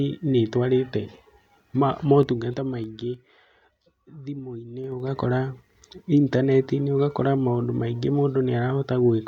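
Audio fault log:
2.08–3.60 s and 4.80–5.20 s, zipper noise: a dry ticking rides on the speech while its level moves, first as slow, separate clicks about three a second as the level drops by roughly 15 dB, then as a quick zip of about fifteen clicks a second as it climbs back up. The gain changes in abrupt steps of about 3 dB with no smoothing between them, so each jump puts a small click into the waveform.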